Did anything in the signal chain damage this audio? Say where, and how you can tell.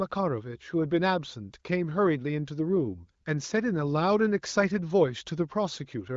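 No, nothing in the signal chain stood out as damaging this speech on listening.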